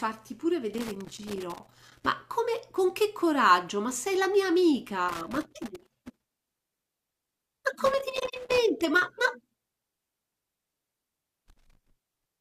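Speech interrupted by four bursts of loose connector crackle, at 0.74–2.06 s, 5.09–6.89 s, 7.86–8.58 s and 11.18–11.90 s, where an unstable contact keeps opening and closing. The waveform shows ragged dropouts and spikes, and the spectrogram shows irregular broadband vertical streaks.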